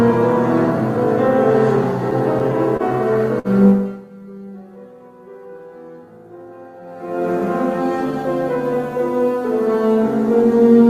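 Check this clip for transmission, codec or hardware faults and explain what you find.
Three kinds of fault are audible: a cluster of short concealed gaps, one brief stall, and two passages of zipper noise during level changes.

Scattered short gaps, 2.10 to 2.82 s. About four small packet losses fall across this stretch. The receiver covers each by extending the preceding sound, around 50 ms of fill in total, the longest single patch near 30 ms. Nothing is audibly dropped, but the audio picks up brief ticks and slight smearing where each patch is spliced back into the real signal.

Short stall from a late packet, 3.39 to 3.47 s. A packet arrives late, the jitter buffer runs dry, and the receiver holds the last sound for 51 ms until the packet lands. Playback then resumes from the same point, so no audio is lost, but everything after is pushed 51 ms later. It sounds like a momentary sustained hiccup with a faint buzzy quality, a single held moment in the flow.

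Zipper noise, 3.68 to 4.08 s and 6.81 to 7.29 s. In the first passage the level drops by about 20 dB, and in the second it rises by about 20 dB. Neither change is smoothed. The gain jumps in discrete steps, around a hundred per second, which points to one update per buffer of roughly 10 ms. The first passage moves in 1 dB steps and the second in steps under half a decibel. Each jump puts a small discontinuity in the waveform, heard as a fine ticking or zipping texture riding on the sound while the level moves.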